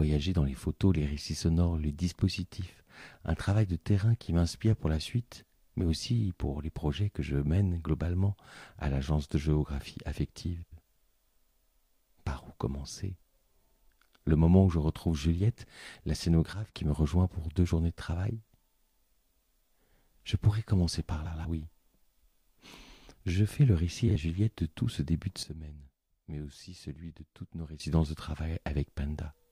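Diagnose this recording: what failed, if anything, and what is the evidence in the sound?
Frames out of order, in the packet or frame delivery path (network or storage): two adjacent runs of coded frames were swapped before decoding. At 10.62–10.82 s and 21.25–21.45 s, blocks of 92.9 ms trade places, which points to runs of about four frames each. At 24.08–24.16 s the swapped blocks are 46.4 ms, consistent with about two frames. Each stretch plays with its halves exchanged, giving a brief garbled flutter. No time is lost overall.

Sudden gain jump, likely from a digital gain setting applied in the processing chain without a ramp: the level changes between one sample and the next. From 16.53 to 16.74 s the sound and its background noise drop together by about 10 dB, then return. From 25.43 to 27.8 s they drop by about 12 dB before coming back. Because the noise floor moves in step with the sound, the change is a gain step rather than a change in the source.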